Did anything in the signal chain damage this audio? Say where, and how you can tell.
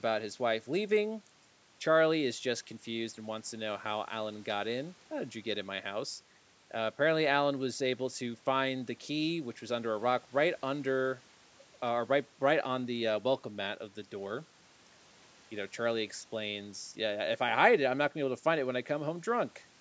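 No, the signal chain left this speech intact: the call microphone processing limits the band to nothing above 8 kHz and trims the lowest bass as intended, and the room noise sits about 34 dB below the speech.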